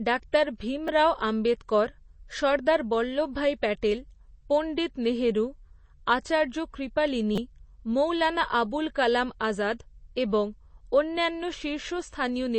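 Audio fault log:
Throughout, MP3 compression: the speech sounds watery and swirly, and nothing gets through above about 8.3 kHz. That's likely a low-bitrate encode, around 32 kbps, where the encoder cuts the treble and weak frequency lines flicker on and off from frame to frame.
0.88 s, repeated buffer: a tiny click as a 5.3 ms chunk plays twice with a hard join, consistent with a 256-sample buffer. New audio arrived late, so the device replayed what it had and dropped a few milliseconds.
7.36 to 7.38 s, repeated buffer: a 5.3 ms chunk plays five times in a row, a brief buzzy stutter about 21 ms long, with roughly 20 ms of real audio lost.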